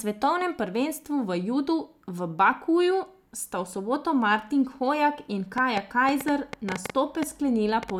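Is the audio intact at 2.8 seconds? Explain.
Yes, at 2.8 seconds the speech plays through intact, with no dropout, glitch or other fault at that moment.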